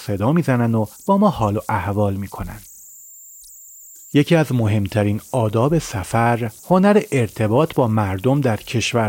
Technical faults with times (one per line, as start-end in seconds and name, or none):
0.00-9.08 converter idle tones